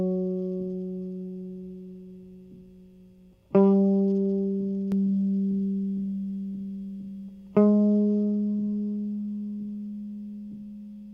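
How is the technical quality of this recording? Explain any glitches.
The recording has one glitch, a doubled audio track, from 4.92 to 7.74 s. For that stretch the music is heard twice. A second copy trails the first by about half a second. It sits at roughly the same level as the original. The copy has no reverb tail or room colour. It switches on and off abruptly. The likely cause is a second, slower capture path, or an edit holding two copies out of step.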